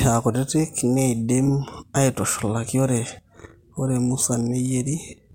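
No technical fault can be heard anywhere in the speech recording.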